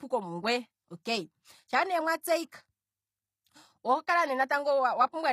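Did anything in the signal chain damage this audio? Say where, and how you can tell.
Yes, at the codec stage, throughout the speech: the treble stays bright but s sounds come out gritty and lispy, consistent with a likely HE-AAC compression rebuild near 24 kbps. Plain band-limiting would sound dull instead, with no synthetic, misaligned top end.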